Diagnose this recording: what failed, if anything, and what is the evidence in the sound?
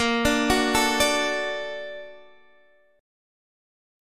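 Nothing failed; no faults found.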